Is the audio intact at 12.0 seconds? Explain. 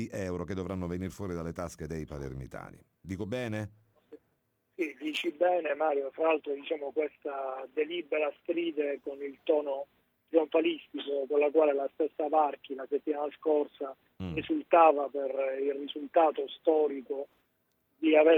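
Yes, the audio is intact at 12.0 seconds, with no fault present at that moment.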